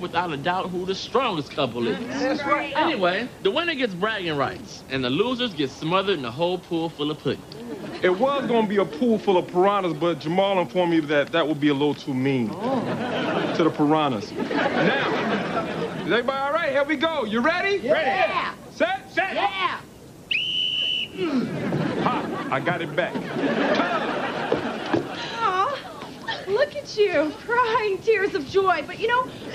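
No technical faults can be heard anywhere here.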